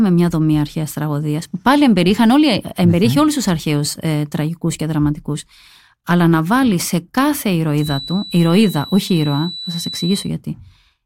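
After "να βάλει σε κάθε", 7.76 to 10.32 s, a quiet feedback whistle holds at 4 kHz, likely a loudspeaker-microphone loop near instability, showing as one thin horizontal spectrogram line.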